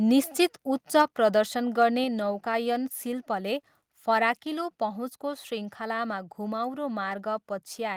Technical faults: microphone overload; microphone volume stepped down

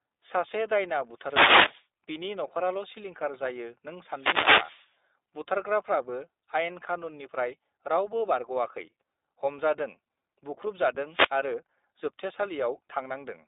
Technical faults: iLBC codec; wireless microphone noise hit

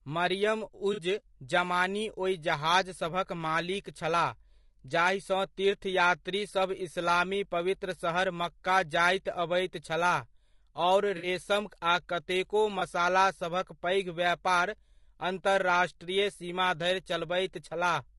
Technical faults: low-delay AAC compression; AAC frame loss with concealment

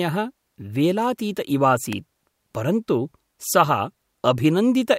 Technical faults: electrical switching spike

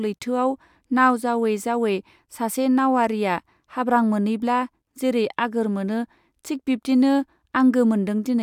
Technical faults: none

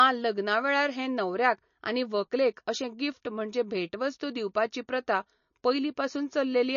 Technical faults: MP3 compression

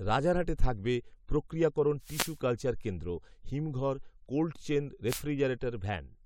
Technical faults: wireless microphone noise hit

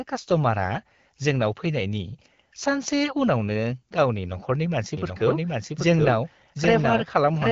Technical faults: doubled audio track

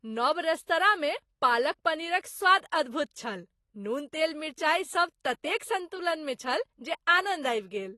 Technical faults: AAC compression

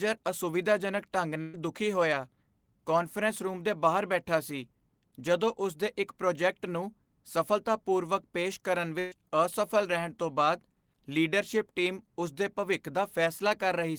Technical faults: burst of packet loss

